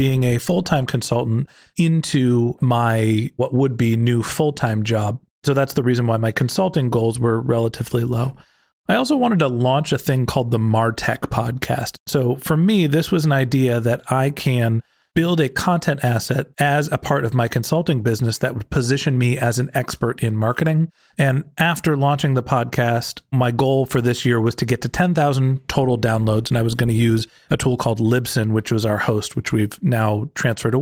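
Nothing goes wrong in this speech recording: it simply comes through the Opus voice coding at 24 kbps, and there's no fault to point to anywhere along the way.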